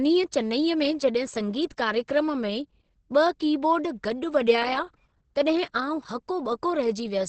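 Throughout the speech, the sound is muffled and hoarse, with nothing above about 8.5 kHz and heavy coding damage. This is likely Opus compression in its SILK speech mode, which fits a rate near 12 kbps. Unlike MP3, there is little swirling and few holes, just a dull, rough band-limited tone.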